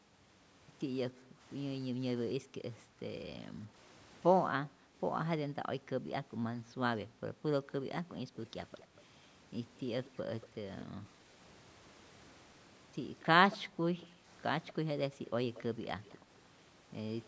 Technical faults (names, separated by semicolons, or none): background gated by the echo canceller; echo leak